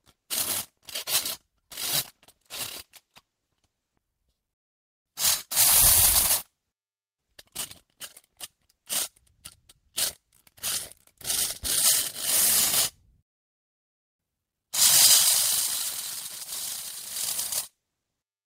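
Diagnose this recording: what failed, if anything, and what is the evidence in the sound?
A call bitrate drop at the codec stage runs from 2.0 to 4.28 s. The sound turns rough and watery, and the top end dulls for about 1.2 s at the worst point. That's the encoder coding coarsely after the bandwidth estimate fell, which fits a cut from roughly 32 to 16 kbps.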